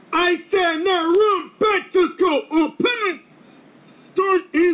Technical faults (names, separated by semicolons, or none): none